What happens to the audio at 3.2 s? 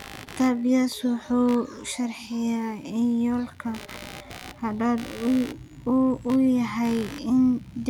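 Computer activity noise runs through the whole clip: load changes shift the audio circuit's shared ground, adding a buzzing pulse near 70 per second, well below the speech.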